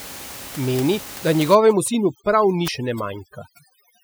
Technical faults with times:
1.04 dropped buffer (overrun)
1.55-4.04 overdone noise removal
1.88 dropped buffer (overrun)
2.68 dropped buffer (overrun)

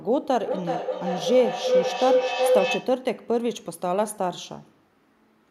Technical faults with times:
0.43-3.08 feedback howl

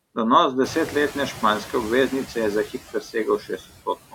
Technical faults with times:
0.00-4.14 noise suppressor artifacts
0.63-1.30 noise suppressor catching up
2.93-4.14 speech cut by the noise suppressor

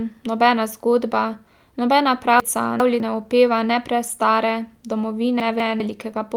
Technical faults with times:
2.40-3.00 chunks out of order
4.07 lost packet rebuilt from error correction
5.40-5.80 chunks out of order

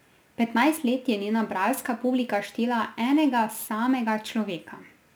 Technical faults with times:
0.00-5.16 crude rate conversion

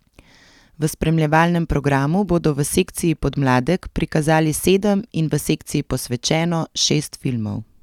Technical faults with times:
none

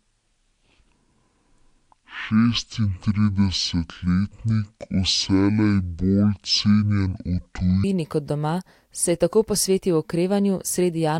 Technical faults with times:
0.00-7.84 section at the wrong speed

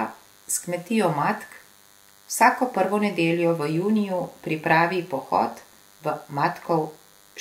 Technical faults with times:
0.00-7.40 DECT cordless phone buzz

